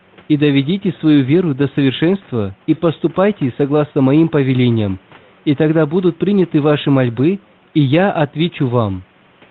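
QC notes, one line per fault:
The speech signal is intact, with the room's background sitting about 33 dB below it.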